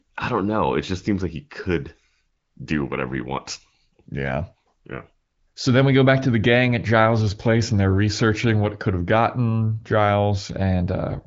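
No faults can be heard.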